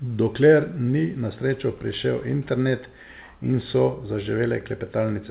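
Speech clip with no audible technical faults.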